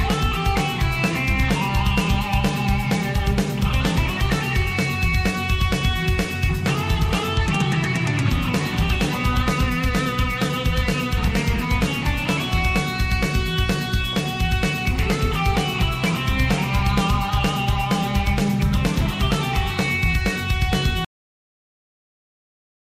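At 21.05 s the final buffers were never written or played, a cut-off end: the sound stops mid-event and drops straight into digital silence, with no decay.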